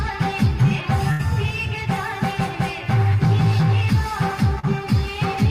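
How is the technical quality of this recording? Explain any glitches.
The recording has two network dropouts, one longer and one brief.

At 1.11 to 1.21 s there is a burst of packet loss: about 80 ms of audio never arrived. The receiver extended the preceding sound and faded it, so it smears into a held tone or hiss before the sound resumes with a piece missing.

At 4.59 to 4.65 s a short concealed packet loss drops about 40 ms. The decoder bridged the hole by continuing the last sound, then blended back into the real signal, leaving a quick smear or wobble.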